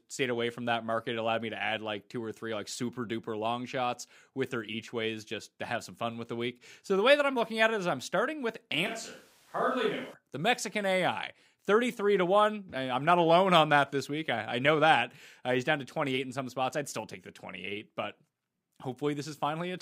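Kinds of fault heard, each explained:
Switch to a distant microphone: from 8.86 to 10.14 s the speech abruptly turns roomy and thin, roughly 5 dB quieter with audible room noise, likely a farther microphone; unlike a plain level dip, the tone changes too.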